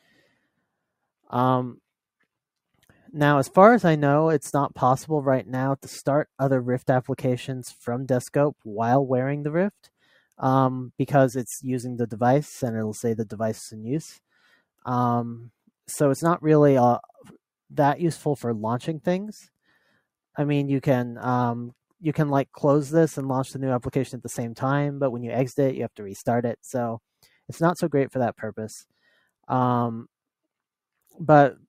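From 9.84 to 10.39 s, the noise suppressor mistook wanted sound for noise and cut it, pulling the level down about 13 dB for roughly a fifth of a second.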